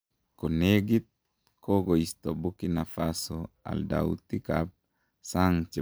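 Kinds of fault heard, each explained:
No faults detected in the speech.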